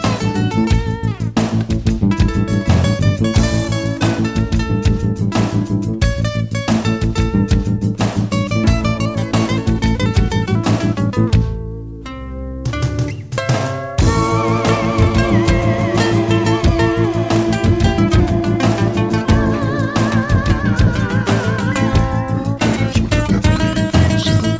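No faults are audible; the audio carries the expected coding texture of a call path, with the top end stopping at 8 kHz, consistent with a wideband codec such as G.722 at 64 kbps.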